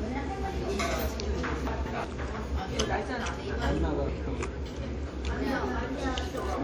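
Chunks out of order at 1.67 to 2.04 s and again at 4.09 to 4.46 s. In each span two chunks of about 186 ms trade places: the later chunk plays first and the one it should follow arrives a chunk late. No audio is lost, but the sequence is scrambled, so each span sounds like a brief jumbled stutter, with three abrupt joins.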